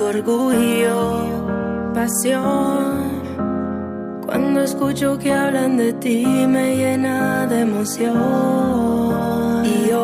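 No technical faults can be heard in this recording.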